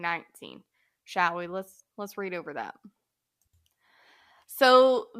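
Nothing stood out on listening to this speech recording.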